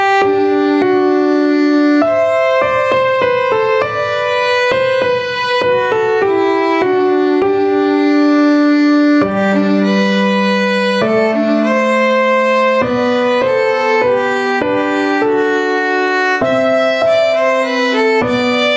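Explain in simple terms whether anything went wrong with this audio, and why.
Gain pumping runs through the whole recording. The microphone level was likely set far too high, so an automatic limiter keeps yanking it down on every loud sound. Loud and soft parts end up closer in level, leaving everything squashed together.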